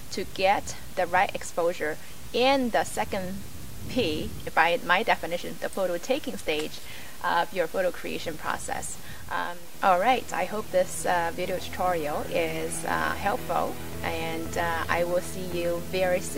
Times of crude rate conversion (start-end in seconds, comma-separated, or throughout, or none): 0.00-11.47